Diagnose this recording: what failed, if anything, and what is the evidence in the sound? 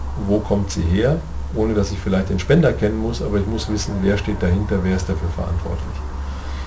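Aliasing runs through the whole clip, introduced at the sample-rate conversion stage. Content above 8 kHz folds back as gritty, inharmonic tones roughly 30 dB below the signal, pointing to a 16 kHz resample with no anti-alias filter. Unlike a clean low-pass, the folded tones don't track the original pitches.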